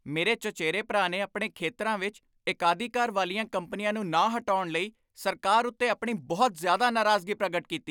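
Speech recording with no technical faults heard anywhere.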